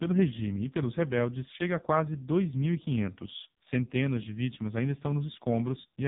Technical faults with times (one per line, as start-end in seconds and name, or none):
0.00-6.07 AMR narrowband mobile codec